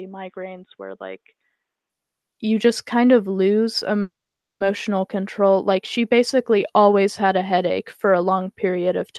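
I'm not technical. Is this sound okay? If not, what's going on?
No. From the start until 1.9 seconds, the sound is muffled and quieter. The likely cause is an input switched to a poorer device, which passes nothing above 3.8 kHz.

From 4.01 to 4.62 seconds there is a call audio freeze. The sound stops for about half a second, then carries on without losing anything. Delayed network data is the likely cause.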